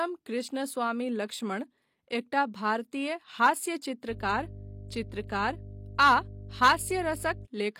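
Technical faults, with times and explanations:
4.07 to 7.48 s, mains hum: a ground loop or a nearby transformer let the 50 Hz power line couple into the signal path partway through the recording. From 4.07 s a steady low tone at 50 Hz sits under the speech, around 15 dB below it, and continues unchanged to 7.48 s. Because the tone is continuous and does not follow the speech, it is audible through the pauses as well as under the talking.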